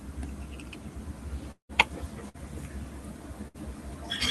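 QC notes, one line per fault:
1.51–1.72 s, long network dropout (likely cause): the last sound is stretched into a fading buzz or hiss, then drops to about 0.1 s of near-silence. Playback resumes further on, with roughly 0.18 s of audio never delivered and skipped.
2.29–2.37 s and 3.48–3.57 s, burst of packet loss: each gap is bridged by a short continuation of the preceding sound that fades as it runs, about 50–60 ms long. The audio then picks up with about 60 ms missing each time.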